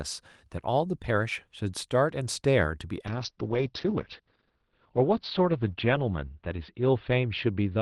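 Speech over an Opus call hits a call bitrate drop at 3.13 s, narrowing bandwidth from 12 kHz to 6 kHz and roughening texture, without packet-loss gaps.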